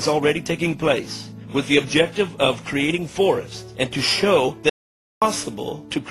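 At 4.70 s the audio drops out to silence for 0.52 s, until 5.22 s. No room tone remains. The input was likely lost while recording continued.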